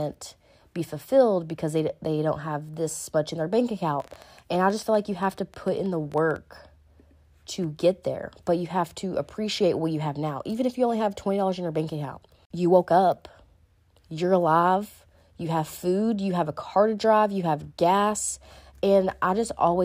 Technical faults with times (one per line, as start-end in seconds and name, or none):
4.00-6.37 train of clicks